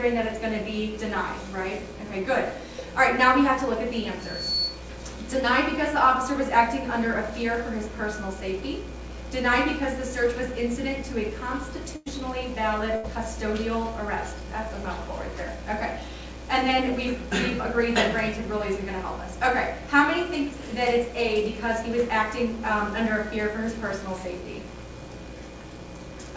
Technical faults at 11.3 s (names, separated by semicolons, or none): none